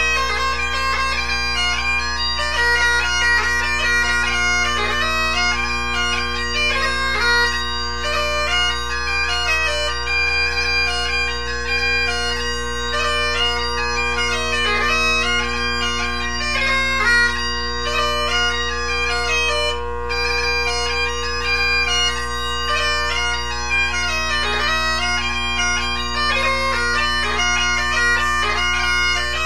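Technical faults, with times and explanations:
No technical faults are audible in this recording.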